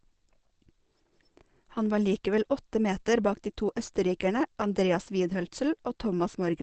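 From start to finish the speech sounds muffled and hoarse, with nothing above 8.5 kHz, so sibilants lose their air and edge. This is likely Opus compression running in its speech-oriented SILK mode at wideband. That mode models the voice rather than keeping each band's fine detail, and the audible damage fits a low bitrate of around 16 kbps.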